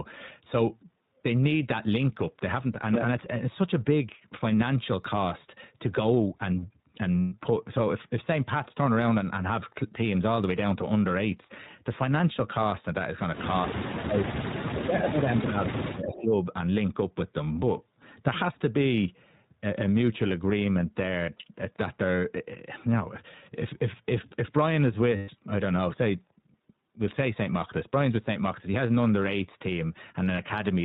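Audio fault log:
throughout: iLBC codec. Nothing above 4 kHz, and the speech has a rough, slightly synthetic edge, which fits 20 ms frames at 15.2 kbps.
7.21–7.34 s, 21.26–21.29 s, 25.16–25.30 s, 30.36–30.38 s: lost iLBC frames. The decoder fills each gap with a held, buzzy repeat of the last pitch cycle. The longer gaps of 120 ms fit about six missing frames. Speech snaps back right after.
13.68–16.38 s: speech suppressed in double talk. The voice dips and cuts out in pieces, by about 35 dB at worst, for roughly two seconds in total. This is likely the echo canceller ducking both sides while they overlap.
14.78–15.12 s, 15.79–15.83 s, 16.03–16.16 s: echo leak. Scraps of the voice return 287 ms late, about 15 to 20 dB down, likely residue from a loudspeaker the canceller missed.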